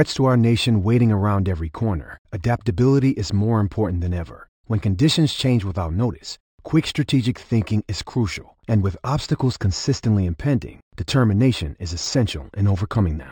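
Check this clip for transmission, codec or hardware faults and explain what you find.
One fault runs through the whole speech clip: imaging from linear upsampling. The content stops near 6 kHz, which fits audio raised from 12 kHz to 48 kHz by straight-line interpolation. That weak filter dulls the top and leaves a mirrored copy, roughly 25 dB down, spanning 6 to 12 kHz. On a spectrogram it appears as a faint reflection above the cutoff. It is heard as a light metallic shimmer on sibilants.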